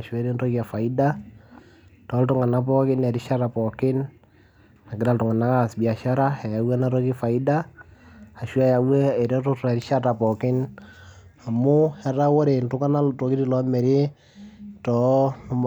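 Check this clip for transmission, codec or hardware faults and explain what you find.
Nothing in the speech stood out as a problem on listening.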